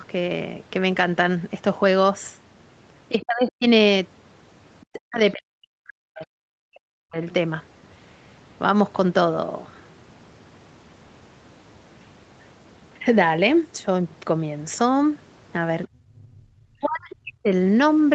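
Speech suppressed in double talk hits this speech recording four times: 3.19 to 3.66 s, 4.85 to 7.17 s, 15.88 to 16.47 s and 16.72 to 17.5 s. In each span the talker's level collapses by roughly 35 to 40 dB at its deepest, and the longest stretch loses about two seconds. The likely cause is an echo canceller that could not tell the talker from loudspeaker echo while both sides spoke, so it turned everything down. The other side's voice leaking through appears as a brief scrap at about 17.11 to 17.15 s, inside the last dip. It sits roughly 25 dB below the talker and is likely residual loudspeaker echo that the canceller failed to remove from the microphone. Over the whole clip the audio stops near 8 kHz, which fits a wideband Opus call path at a modest bitrate.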